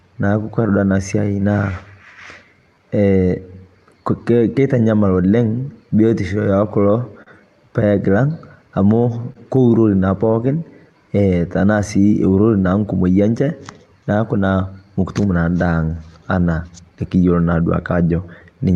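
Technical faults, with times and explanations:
Technical faults, with times and explanations:
Throughout: clock drift between sender and receiver. The sender's clock runs roughly 3% slow, so the jitter buffer keeps draining and the receiver must keep padding. Unlike a single network glitch, the unevenness persists across the entire clip rather than clustering in one spot.
0.67–18.76 s: repeated timing corrections. To stay in step, the receiver keeps inserting tiny stretches, all lengthening, adding around 0.4 s overall and slowing playback to 98%. This is heard, if at all, as a slightly dragging, unsteady tempo, not as distinct dropouts or smeared ticks.
5.74–7.29 s: scattered short gaps. A few packets arrived late or not at all, and each hole, the longest about 40 ms, was patched by extending the preceding sound. This produces isolated brief smears or ticks confined to this stretch, unlike the steady drift-driven tempo wobble.
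9.32–9.37 s: short stall from a late packet. The buffer ran empty, so the last sound was held for 30 ms until the packet arrived, then playback resumed where it left off. Nothing is lost; it is a single held moment with a slight buzz or dip, not scattered patches.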